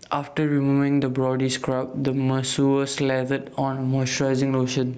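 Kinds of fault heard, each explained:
Gain pumping: The gain rises in the pauses and dips whenever the speech gets loud, swinging by roughly 10 dB. Loud and quiet passages sit close in level and sound squashed. The likely cause is excessive input gain driving a fast limiter.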